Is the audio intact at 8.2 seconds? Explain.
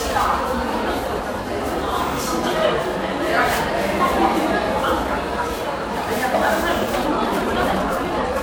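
No. At 8.2 seconds the sound is rushed while its pitch stays put. This is a time-stretched section running from 6.85 seconds to the end of the clip, sped up about 1.89 times, likely by software that dropped short pieces to shorten it while keeping pitch.

The same moment also sounds swirly, smeared and hollow, with blurred attacks and nothing above 20.9 kHz. That is generation loss, likely from roughly fifteen lossy passes that fit MP3 at 128 kbit/s. Each pass re-quantises on a shifted frame grid, so noise and spectral holes build up.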